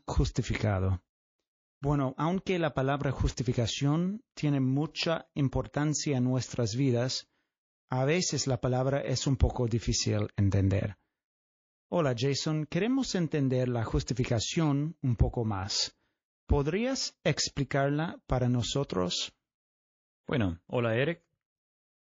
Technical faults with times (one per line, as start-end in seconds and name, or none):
0.00-22.02 MP3 compression
20.24-20.28 pre-echo